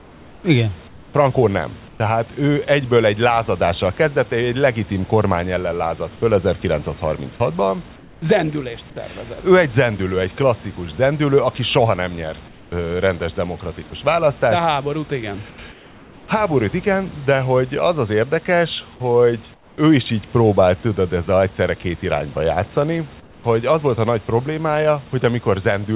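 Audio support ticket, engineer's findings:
Comfort noise in place of the background during speech pauses, at 0.0–1.14, 1.88–2.0, 7.96–8.22, 12.48–12.72 (after "zendülő aki soha nem"), 15.5–16.28 (between "háborút igen" and "igen de hogy az"), 19.54–19.78 (before "is így próbált tudod") and 23.2–23.44 s. Real room noise is swapped for flat, featureless hiss, about 3–7 dB quieter. Likely cause: sender discontinuous transmission, with the receiver synthesising the fill.

Sound dropped by the voice detector at 13.90–13.92 s. A 10 ms scrap of sound is lost and replaced by steady noise. Probably the sender-side detector mistook the sound for background and paused sending. The band stops near 4 kHz, which points to a narrowband call codec.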